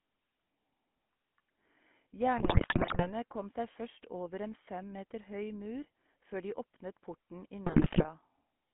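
The whole clip passes through the GSM full-rate codec, whose damage is plainly audible. The vocal tract is modelled and excited by sparse regular pulses, leaving a buzzy, gravelly roughness, and the band is held to about 200 Hz to 3.4 kHz, which fits 13 kbps GSM.

GSM bit errors strike from 2.38 to 3.13 s, just before "kom seg først over", and again from 7.66 to 8.08 s, right after "før de åpnet porten". Corrupted filter, pitch and gain values warp the spectrum and level frame by frame, producing squawks, pops and gargling.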